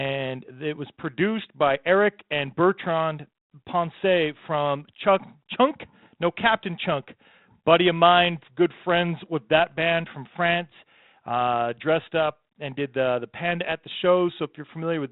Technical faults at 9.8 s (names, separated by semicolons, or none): bit errors on an ADPCM link